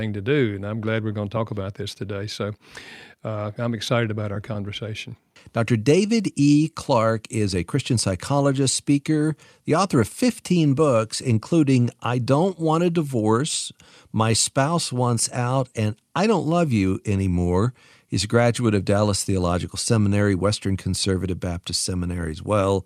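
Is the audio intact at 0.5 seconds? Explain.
Yes, the speech at 0.5 seconds plays through intact, with no dropout, click, distortion or other fault at that point.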